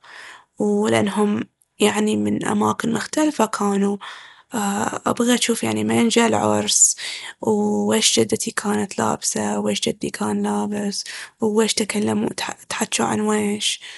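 The encoding was most likely Dolby Digital compression at a low bitrate, which fits a stream of around 64 kbps. Throughout the speech, the encoder has cut the band so that nothing remains above about 11.5 kHz. It has also given many frequency lines no detail, so the decoder filled them with noise. The result is plainly audible: the speech sounds dull and muffled at the top, with a rough, fluttering grain clinging to its tonal parts.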